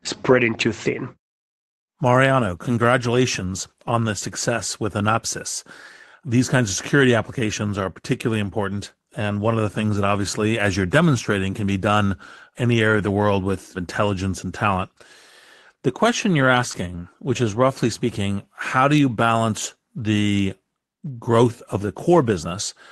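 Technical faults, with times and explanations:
16.71 to 16.75 s, short concealed packet loss: just after "question you're" and before "which is roughly speaking", about 20 ms of the stream failed to arrive in time, so the receiver extended the preceding sound to bridge the gap and then crossfaded back, leaving a brief smear in the speech.
16.73 s, lost packet rebuilt from error correction: one lost packet, 20 ms long, was replayed from the low-bitrate redundant copy carried in the following Opus packet, which sounds rougher and noisier than the surrounding audio; the codec's roughly 12 kHz band limit applies across the call.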